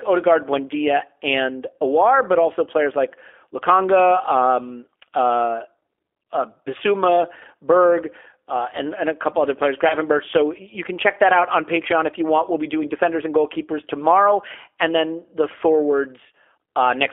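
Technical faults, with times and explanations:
Throughout: G.729 codec. The audio is squeezed into a 300 Hz to 3.5 kHz line band, and the texture fits an 8 kbit/s codec that rebuilds speech from a vocal-tract filter, pitch predictor and sparse pulses. That plainly audible modelling sounds rough and synthetic.
9.88–9.95 s: VoIP packet loss concealed by the speech codec. Just after "a couple other players", about 20 ms of audio goes missing, pointing to a single lost packet. The decoder extrapolates its last pitch and filter with falling gain, leaving a brief smear that recovers slowly.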